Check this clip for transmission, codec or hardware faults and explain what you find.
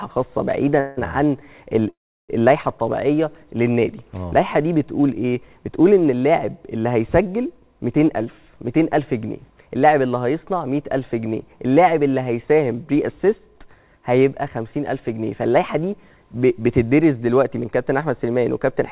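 Two kinds of transmission fault are audible: two call audio freezes near the start and one jitter buffer speed-up later on.

Call audio freezes occur at 0.80 to 1.00 s and 1.89 to 2.32 s. The sound stalls, then resumes where it stopped. The likely cause is delayed packets draining the jitter buffer. The receiver stretches the last sound to cover the wait. The first gap lasts 168 ms and stays filled with a fading buzz or hiss. The second lasts 392 ms, and 340 ms of it decays to silence. Nothing is lost. Each gap simply adds delay.

A jitter buffer speed-up runs from 14.77 to 15.30 s. Here the buffer held more audio than its target. The receiver trimmed short pitch-period pieces in quick succession, about 40 ms in total. The passage plays at 106% speed with unchanged pitch, so it sounds slightly hurried.

Throughout, nothing reaches above 4 kHz, which fits a 64 kbps G.711 mu-law call path.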